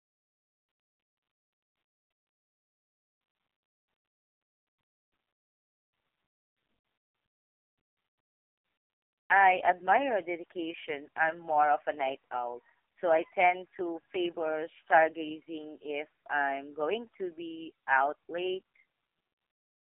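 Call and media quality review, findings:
AMR narrowband mobile codec damage, whole clip. Speech is buzzy, synthetic and thin, with a 300 Hz to 3.4 kHz line band. Spectrogram shows an empty region above 3.5 kHz and coarse, smeared formants in 20 ms frame blocks. Heavy degradation, consistent with the lowest AMR-NB mode, 4.75 kbps: few excitation pulses per subframe, with sampling at 8 kHz.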